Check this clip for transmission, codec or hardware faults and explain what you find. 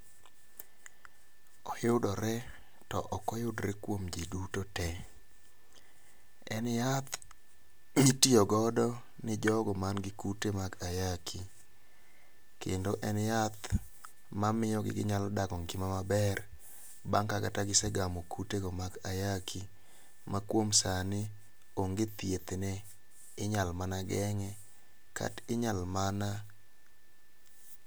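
Nothing stood out on listening to this speech recording.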